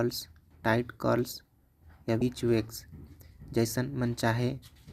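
At 2.19 to 2.22 s, damaged data in a compressed stream throws the decoder out of sync, and the speech briefly breaks up.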